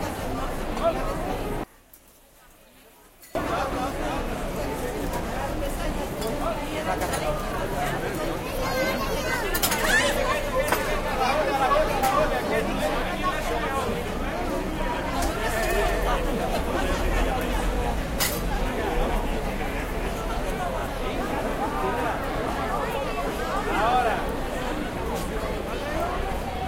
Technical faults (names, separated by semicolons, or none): one channel inverted